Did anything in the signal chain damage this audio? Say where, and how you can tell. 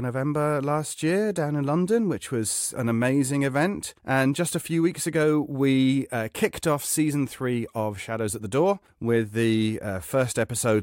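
No, nothing in the chain audibly damages this speech recording at any stage.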